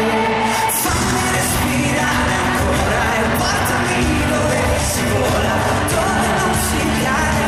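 No technical faults can be heard anywhere in the recording; the signal stays steady and intact throughout.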